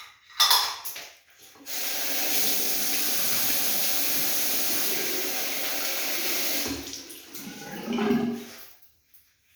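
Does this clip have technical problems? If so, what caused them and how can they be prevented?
No, I hear no technical problems in this audio.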